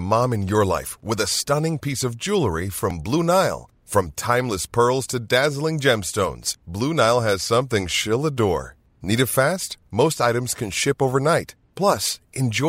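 At 2.90 s, right after "stunning piece of jewelry", a repeated buffer occurs. New audio arrived late, so a tiny block of about 1.33 ms, which fits a 64-sample buffer, played twice more. It sounds like a sharp click, seen as a thin vertical line on a spectrogram.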